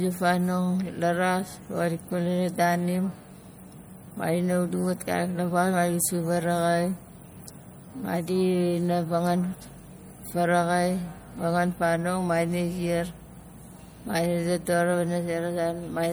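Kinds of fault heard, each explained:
MP3 compression: Throughout the speech there is plainly audible codec damage, a watery, swirly texture. The likely cause is lossy MP3 encoding, and the damage fits a low rate near 64 kbps. MP3 divides the sound into many narrow frequency lines and feeds bits only to those its hearing model rates as important. Weak lines get zeroed and flicker on and off between frames. Treble is not cut low here, since content reaches about 21.1 kHz.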